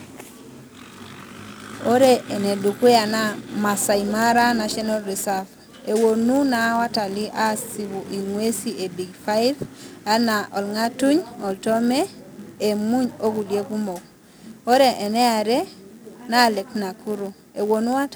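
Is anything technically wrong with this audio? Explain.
Yes, there's one problem running through the whole clip: a block size mismatch with zero padding. One stage in the chain hands over blocks a little shorter than the next stage expects, and the leftover space in each block gets filled with silence. That tiny gap repeats about 91.5 times a second, so you hear a steady buzz at that rate under the speech, and everything plays at 0.996 times normal speed while the timbre stays put.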